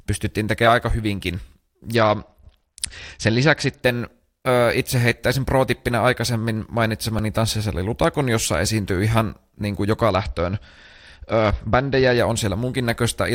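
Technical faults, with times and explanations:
1.95–3.81 s and 10.10–12.18 s, Bluetooth SBC bit pool drop: the speech turns dull and gritty, then clears. This fits the link falling from a bit pool of 31 to 9, roughly 72 kbps, which starves the top sub-bands and coarsely quantises the rest. Grit with muffling separates it from a plain low-pass.
7.19 s, repeated buffer: a tiny slice of about 1.33 ms plays four times in a row with a hard join each time, heard as a brief click-buzz rather than a stutter. The size fits a 64-sample buffer. Unlike a dropout, no audio goes missing.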